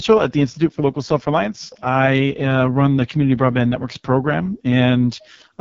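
From start to finish the speech carries heavy AMR wideband (HD Voice) codec damage, with a rough, raspy, buzzy texture that fits the codec's lowest 6.6 kbit/s mode. At that rate the pulse-driven vocal tract model has too few bits to follow the voice, so its harmonics come out smeared and gritty. On a spectrogram the harmonic structure looks blurred and patchy below 6.4 kHz, with a thin band of shaped noise above it and nothing at all above 7.6 kHz.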